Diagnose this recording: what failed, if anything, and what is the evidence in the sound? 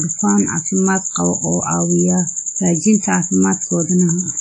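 Speech rings and smears throughout, with hiss breathing along with it and nothing above 10 kHz. The codec stage is at fault, likely WMA compression at a bitrate near 32 kbps.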